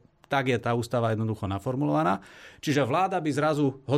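Nothing stood out on listening to this recording of speech.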